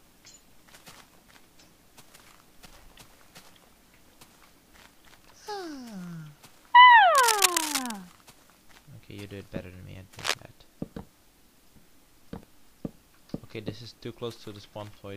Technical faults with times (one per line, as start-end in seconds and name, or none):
7.15-7.93 cable scratch noise
10.19-10.34 cable scratch noise